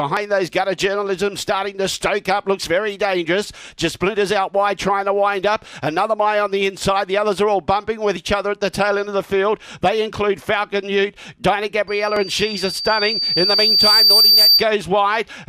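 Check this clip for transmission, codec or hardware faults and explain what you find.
There's one clear problem, a loudspeaker feedback squeal from 11.88 to 14.66 s. A mic is hearing the speaker it drives, and at 4.6 kHz the loop gain tops one, so a thin whistle swells over about two seconds to roughly 10 dB above the sound.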